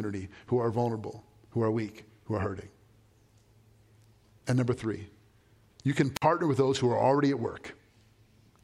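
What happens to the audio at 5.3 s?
At 5.3 s the speech carries on intact, with no audible dropout, click, distortion or other fault at that moment.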